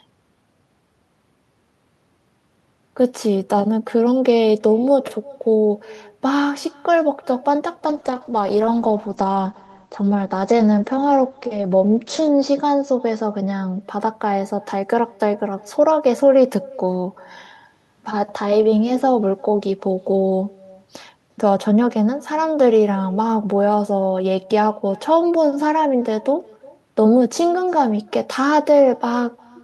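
It's a speech recording with two problems. All the way through there's echo with no canceller: a faint, thin copy trails each phrase by roughly 0.4 s, about 26 dB under the direct sound. That's the far end's loudspeaker feeding back into its microphone with nothing there to cancel it. From 7.9 s to 13.87 s there's a call bitrate drop. The top end collapses from around 20 kHz down to 8 kHz, and the sound goes rough and muffled, worst for about 4.4 s. That fits the encoder being pushed from something like 64 kbps down to around 12 kbps after the bandwidth estimate fell.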